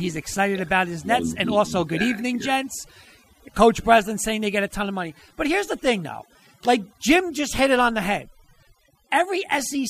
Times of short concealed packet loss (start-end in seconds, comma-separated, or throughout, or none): none